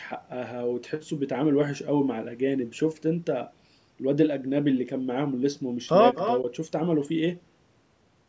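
From 6.15 to 6.4 s, a faint, delayed copy of the speech trails the original by about 257 ms, sitting roughly 10 dB below it. This is an echo leak, likely from a loudspeaker on one side of the call whose echo canceller let some of the microphone's pickup slip back into the call.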